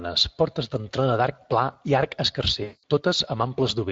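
This speech clip sounds like it went through the Speex codec for its whole length. The coding damage is plainly audible. The voice is hoarse and noisy, because too few bits are left for the excitation signal. The level of damage fits a bitrate of around 20 kbps. From 2.63 s to 2.83 s there is VoIP packet loss concealed by the speech codec. About 200 ms of audio is missing, which fits roughly ten lost frames. The decoder fills the gap by repeating its last pitch and spectral shape. The sound smears into a buzzy tone or coloured noise that fades. Each frame builds on the one before it, so the voice stays weak for a short while after the packets return.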